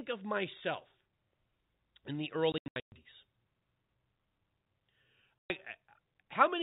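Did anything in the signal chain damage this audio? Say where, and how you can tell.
Yes, at the network stage: packet loss filled with silence. Between 2.52 and 2.92 s about 300 ms of the speech is missing, scattered over 400 ms in gaps of up to 120 ms, and at 5.38 to 5.50 s a single 120 ms hole appears. The holes fall in whole multiples of 20 ms, which points to 20 ms packets under the G.711 telephone coding. The receiver inserted silence with hard edges rather than repeating or fading audio, so this is not concealment.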